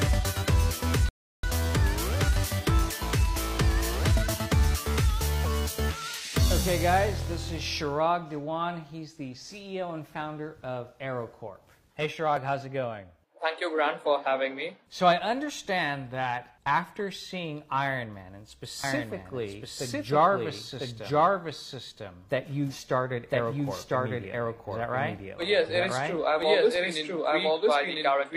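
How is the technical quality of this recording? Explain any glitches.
Two glitches affect the recording, one brief near the start and one that runs through its final stretch.

At 1.09 s a rebuffering stall occurs. Playback ran short of downloaded data and paused for about 345 ms, until 1.43 s, then resumed exactly where it stopped. Nothing is lost, but a gap is added. The waveform shows a flat line, and the spectrogram shows a blank vertical band.

From 18.84 s to the end, a doubled audio track appears. A second full-band copy of the sound follows about a second behind, at roughly equal loudness, with no decay or room colour. It likely comes from a slower second capture path or two misaligned copies in an edit. The copy starts abruptly. The spectrogram shows every event repeated about a second later, and the waveform thickens where the two copies overlap.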